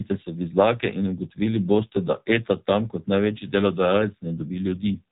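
A speech clip carrying AMR narrowband mobile codec damage throughout, with nothing above 3.8 kHz, so a spectrogram shows a flat ceiling with empty space above it. The plainly buzzy, synthetic, vocal-tract-modelled sound fits a low AMR-NB rate around 7.4 kbps.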